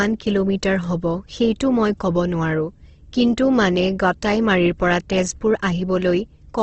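From start to finish the speech carries plainly audible coding damage, most likely Opus compression in its music-oriented CELT mode. Nothing survives above 8.2 kHz, and the sound is rough and grainy rather than swirling, as starved bands are refilled with folded or noise-like energy. That level of damage fits a low bitrate of around 16 kbps. A spectrogram would show a hard ceiling at 8.2 kHz and smeared, speckled texture within the bands below it.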